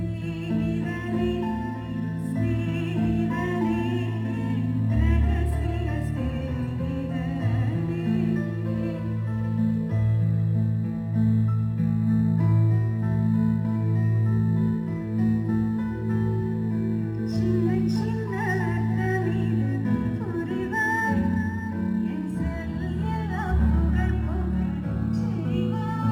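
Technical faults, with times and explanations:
Throughout: crude rate conversion. Samples were repeated rather than filtered, which fits a 44.1 kHz to 48 kHz change. The patterned error, roughly 35 dB below the signal, adds a gritty inharmonic fizz on loud, bright moments. A spectrogram shows faint mirrored partials unrelated to the harmonics.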